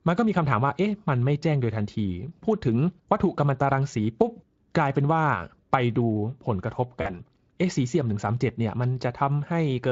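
VoIP packet loss concealed by the speech codec hits at 7.01 to 7.10 s, where about 40 ms of the speech stream goes missing, which fits two lost 20 ms frames. The Speex decoder fills the gap by carrying its last pitch and vocal-tract shape forward at falling gain, so the speech smears into a brief buzzy tone or coloured noise that fades. Because each rebuilt frame feeds the next, the voice stays weak or distorted for tens of milliseconds or more after about 7.1 s.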